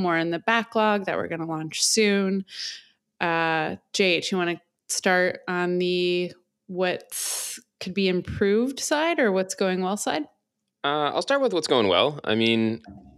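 No technical faults can be heard.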